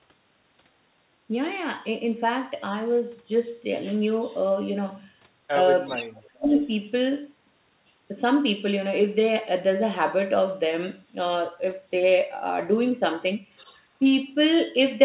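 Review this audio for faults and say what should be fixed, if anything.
Echo leak at 4.05, 5.86, 6.5 and 13.56 s: a delayed copy of the speech returns 379 ms late, roughly 10 to 30 dB below it. It is likely leakage from the far-end loudspeaker that the echo canceller did not fully remove. To prevent it, give the far end's echo canceller a correct delay estimate or have that side use a headset.

Speech suppressed in double talk from 5.97 to 6.5 s: the speech dips by up to about 35 dB for roughly half a second while the echo at 5.86 s overlaps it. This is likely an echo canceller treating simultaneous talk as echo and attenuating both. To prevent it, tune the canceller's double-talk detection so it holds near-end speech through overlaps instead of suppressing it.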